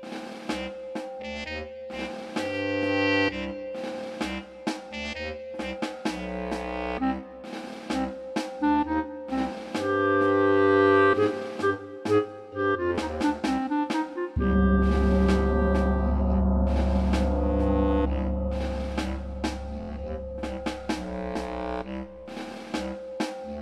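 The audio has two bursts of repeated frames, where one compressed block of about 23.2 ms plays again. At 1.21 to 1.23 s it repeats once, a brief stutter. At 19.81 to 19.88 s it repeats three extra times, a stutter adding 69.7 ms. The block length fits a 1024-sample frame at 44.1 kHz.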